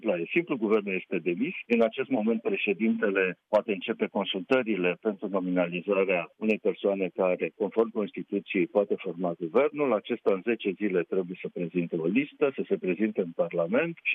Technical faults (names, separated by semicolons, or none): none